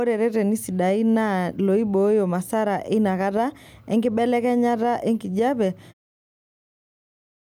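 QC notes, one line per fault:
No faults found; the smooth fade-out at the end is an ordinary edit with no click or hard edge.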